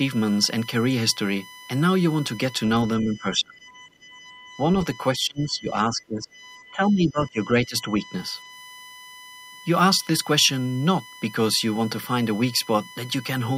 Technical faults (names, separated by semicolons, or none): USB whine; speech suppressed in double talk